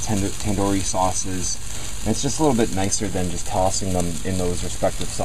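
No technical fault can be heard anywhere in this audio. Nothing in it calls for a time, a value or a cause.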